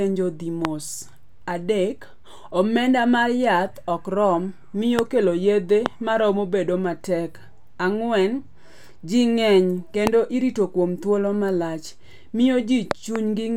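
Speech, with a loud pop at 0.65–0.67, 4.99–5.01, 5.86–5.88 and 10.07–10.09 s, plus a double pop at 12.91–13.18 s, each peaking around 20 dB above the speech. The speech carries on underneath, unlike a dropout. The cause is likely a voltage spike from a plug, switch, static or driver glitch.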